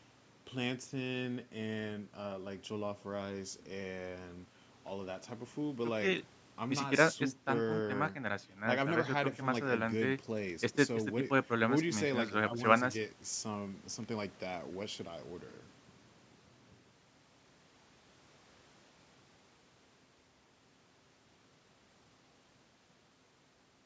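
Nothing stood out on listening: the speech has the ordinary band-limited sound of call microphone processing, with nothing heard above 8 kHz, and no technical faults could be picked out.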